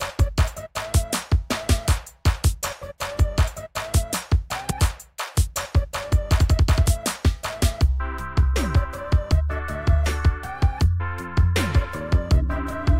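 At 4.69 to 4.71 s there's damaged data in a compressed stream: the decoder hits garbled frames, loses sync briefly, and spits out a short glitch.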